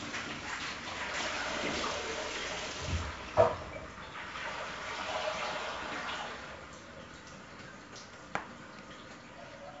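4-bit ADPCM compression runs through the whole clip. Each sample is coded as a small 4-bit step from a predicted value, with the step size adapting as the sound changes, so the coding error becomes broadband noise that tracks the signal level. The damage is heavy: a gritty hiss rides on every loud passage and sharp attacks smear. Nothing remains above 7.7 kHz, which fits a 16 kHz stream at 64 kbps and leaves the sound dull.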